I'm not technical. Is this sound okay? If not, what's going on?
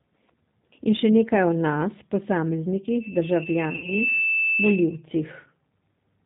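No. Throughout, the speech has passed through the G.729 codec, a phone-call compression scheme that rebuilds the voice from a simplified model, so it sounds muffled and slightly rough or robotic everywhere. Unlike background noise, this colouring is constant and lacks any crisp upper treble.

From about 3.76 to 3.94 s there is VoIP packet loss concealed by the speech codec. A short piece of the call, which fits a couple of missing packets, went missing, and the decoder filled the gap by stretching the preceding sound into a buzzy tone or coloured noise that fades. Unlike a clean dropout, the voice stays weak briefly afterwards.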